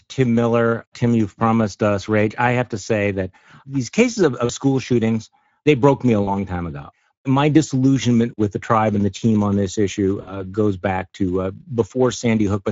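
Speech that sounds hoarse and grainy throughout, with a noise-like fill in place of real top-end detail. These are Speex codec artefacts: the CELP coder has too few bits to rebuild the excitation cleanly, which fits a middle quality setting around 17 kbps. Three brief dropouts leave the voice weak for a moment: at 4.45–4.52 s between "that these cases of" and "school shootings they broke", at 6.23–6.31 s between "they broke me a" and "time ago my disillusionment", and at 10.21–10.43 s between "team on this issue" and "goes back to uh". This is VoIP packet loss concealed by the speech codec. The decoder fills roughly 40 to 60 ms of missing audio by extending its last pitch and filter at falling gain, and it takes a short while to recover once packets arrive again.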